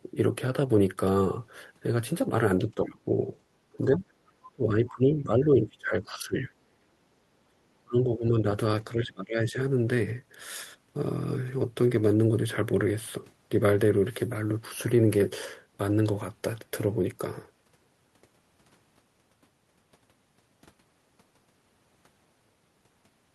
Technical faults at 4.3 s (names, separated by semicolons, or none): other side's voice leaking through